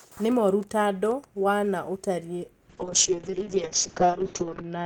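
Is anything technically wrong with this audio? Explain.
Yes. From 2.71 s, right after "tandũ wa na ũtarii", a call bitrate drop makes the speech muffled and coarse through the end of the clip. The encoder was starved of bits, which fits a fall from about 48 to 6 kbps. It quantised coarsely and cut the top band from 20 kHz to 8 kHz, and it never recovers.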